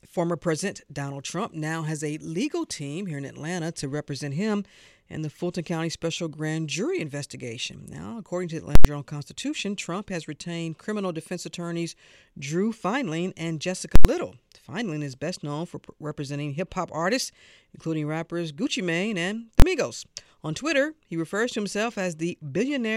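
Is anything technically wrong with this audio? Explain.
Yes. At 8.75–8.85 s and 13.96–14.05 s the speech cuts to a very loud pop, then silence, then another pop. At 19.60–19.62 s there is one bang. This is invalid numbers at full scale: a calculation produced infinite or invalid values, which were pinned at maximum output for an entire processing block. The 93 ms events fit a 4096-sample block, and the 23 ms event fits a 1024-sample block.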